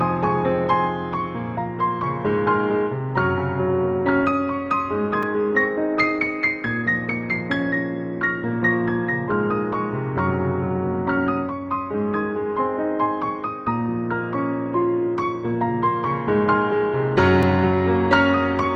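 At 5.23 s and again at 17.43 s there's a block of digital silence: the sound just cuts out for about 4 ms and then 3 ms, with no fade either way, so each one lands as a sharp little tick rather than a hole.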